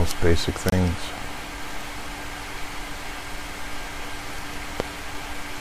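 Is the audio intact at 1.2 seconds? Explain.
No. A loud pop from 1.18 to 1.20 s, likely a voltage pulse from a switch or static, sits roughly 10 dB above the speech. Unlike a dropout, the speech continues underneath it.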